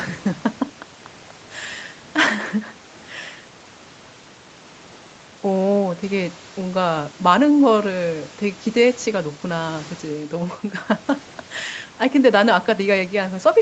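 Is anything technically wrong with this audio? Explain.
No, nothing technically wrong here.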